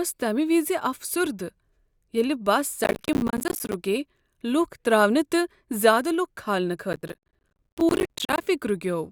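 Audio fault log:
2.84–3.74 s and 6.93–8.41 s, processor overload crackle: a gritty, tearing crackle rides on the speech, then clears. The processor kept missing deadlines for short buffers, likely around 10 ms each, and dozens over each stretch dropped to hard-edged silent gaps.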